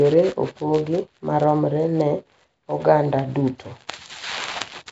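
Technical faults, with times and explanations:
Throughout, Nellymoser compression: the speech carries a rough, hissy halo and a smeared, underwater quality, and nothing sounds above about 7.7 kHz. The likely cause is the old Flash microphone codec, Nellymoser Asao, at a rate that fits 32 kbps. It spends a fixed small budget of bits on short blocks, so weaker frequency bands receive none and are filled with noise instead, producing the hiss, while the coarse blocking blurs detail over time.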